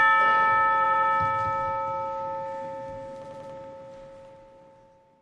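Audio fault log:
0.82–1.09 s and 3.23–3.51 s, repeated frames: in each range a block of about 93 ms, consistent with two compressed frames, plays three extra times, adding about 279 ms to the sound each time. That gives a fast stutter at roughly 11 repeats per second. On a spectrogram, an identical slice tiles four times side by side. The waveform shows the same shape copied end to end.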